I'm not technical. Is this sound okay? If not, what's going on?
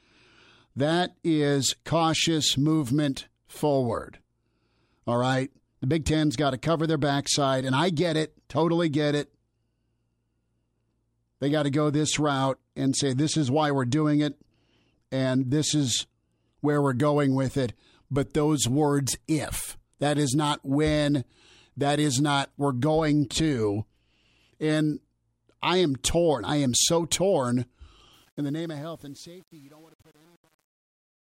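No. Truncation distortion on a fade: the volume stage at the end keeps too few steps, fitting an 8-bit stage with no dither, so from 28.13 s to the end the fade-out turns gritty, worst from 28.55 s.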